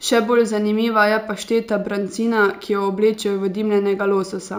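Speech with imaging from linear upsampling throughout, consistent with 16 kHz raised to 48 kHz; faint mirrored images near 8 to 16 kHz, roughly 30 dB down, add shimmer to sibilants.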